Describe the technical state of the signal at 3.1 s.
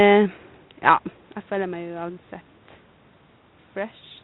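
At 3.1 s the signal is intact, with no fault present at that point.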